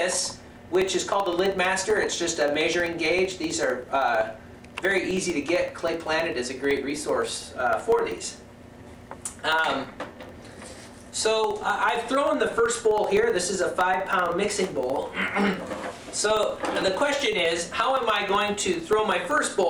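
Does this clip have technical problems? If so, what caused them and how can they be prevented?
Yes. Periodic USB or driver dropouts run from 0.11 s to 19.63 s, with a tick every 64 ms (about 15 per second), some three hundred in all. Each time, something blocked the USB bus or audio driver and about a millisecond of sound was replaced by silence. The waveform shows tiny evenly spaced gaps, and a spectrogram shows a comb of thin vertical broadband lines. Prevent this by finding and disabling the background task, or by using larger driver buffers.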